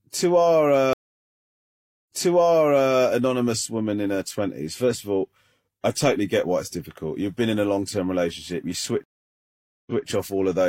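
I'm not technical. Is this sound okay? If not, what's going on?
No. Right after "a long term relationship", the stream connection dropped and reconnected (a stream reconnect), so from 9.04 to 10.05 s the speech goes silent for about 0.83 s, then resumes slightly earlier, repeating about 0.19 s.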